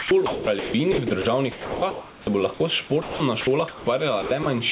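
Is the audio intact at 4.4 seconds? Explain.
No. The stretch from 4.22 to 4.46 s shows sound chopped by the voice detector. The sender's voice activity detector likely toggled between transmitting and muting more than once. About 120 ms of the signal was replaced by comfort noise of the kind standard call systems generate. The sound has holes where it was cut, which makes the passage choppy.

The same moment also carries gain pumping, present throughout the clip. The likely cause is input gain set far too high, with a fast limiter or compressor clamping it on each loud sound. The gain swings around 10 dB. That squashes the dynamics, bringing loud and soft parts closer in level.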